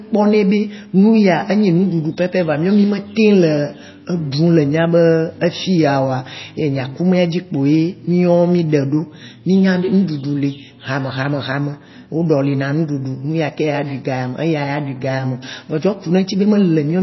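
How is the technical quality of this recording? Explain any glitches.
Technical quality is poor. Plainly audible codec damage runs through the entire recording.

For the full length of the clip, the speech sounds watery and swirly, with metallic chirps on s sounds and blurred consonant onsets. This is likely MP3 compression at a very low bitrate, consistent with something near 24 kbps. The encoder cuts everything above a fixed frequency, so nothing survives above 5.8 kHz. Short of bits, it also zeroes weaker frequency lines, which flicker on and off from frame to frame. On a spectrogram this appears as a hard, flat ceiling at 5.8 kHz, with a patchy, speckled texture of isolated blobs beneath it. In the waveform, transients look smeared.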